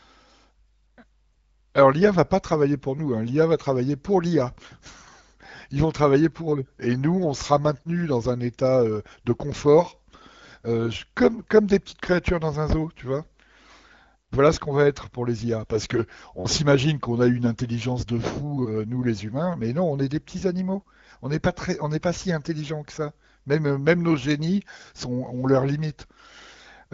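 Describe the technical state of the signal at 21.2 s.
At 21.2 s the speech is intact, carried cleanly through the AMR wideband (HD Voice) codec with nothing audible above about 7.5 kHz, as that path delivers.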